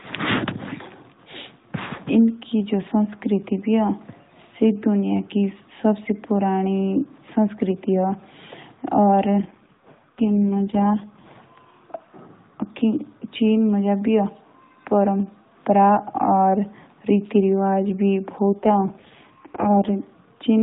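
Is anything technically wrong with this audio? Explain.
Yes, there are two AMR rate drops, at 9.31 to 11.37 s and again at 18.51 to 19.93 s. The speech runs through the AMR narrowband mobile codec, which sounds like it's at its full 12.2 kbps mode. In both stretches it turns buzzier and more synthetic without losing any band or leaving a gap. That fits the link pushing the codec down to around 4.75 kbps, leaving very few pulses to model the voice, before it climbs back.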